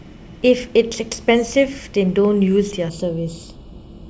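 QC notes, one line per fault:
2.90–4.10 s, channel delay (comb filtering): one channel lags about a third of a millisecond, making speech hollow; spectrogram shows evenly spaced notches starting near 2 kHz.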